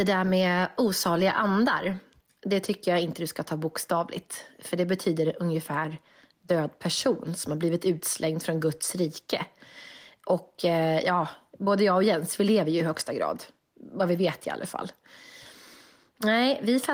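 Opus-coded speech at 24 kbps; no faults heard.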